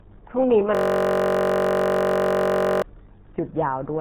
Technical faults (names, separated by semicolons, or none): RealAudio 14.4 codec; system hang loop